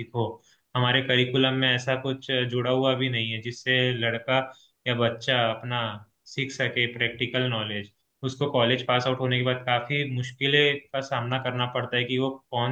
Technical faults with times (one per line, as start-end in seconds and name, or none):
none